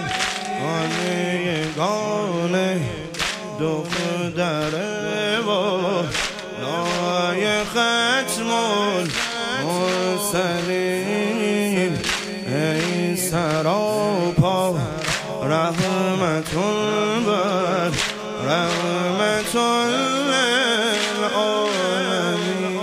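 From 8.96 s to 14.45 s a thin, steady tone at 4.5 kHz sits roughly 20 dB below the sound and swells and fades slowly in level. This is a feedback whistle, likely from a loudspeaker-to-microphone loop held just at the edge of oscillation.

Between 15.65 s and 16.21 s the sound speeds up by 5.7% and its pitch rises by about 97 cents, close to a semitone. This is a drift correction step, likely a clock-matching resampler abruptly changing rate to rebalance its buffer.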